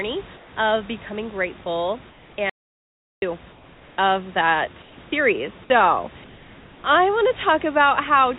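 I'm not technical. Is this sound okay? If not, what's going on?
No. In the pauses, the call system likely stopped sending the real background and the receiver filled in comfort noise in place of the background: a flat, slightly quieter hiss at 0.36–0.56, 2.1–2.38, 3.52–3.98, 4.82–4.98 and 6.24–6.84 seconds. Separately, the incoming audio was probably lost for a moment, causing an audio dropout to silence: from 2.50 to 3.22 seconds the sound cuts to dead silence, with even the room's background gone.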